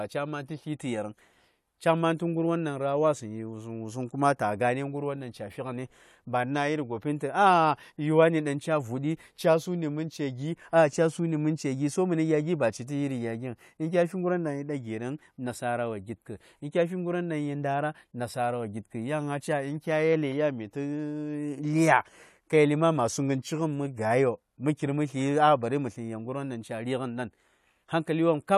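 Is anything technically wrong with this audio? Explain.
No, nothing technically wrong can be heard in this speech recording. There is no problem here that needs explaining.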